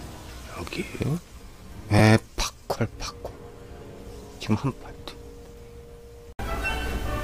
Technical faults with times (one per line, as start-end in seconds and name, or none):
0.69 repeated buffer
1.99 repeated buffer
4.23 repeated buffer
5.46 repeated buffer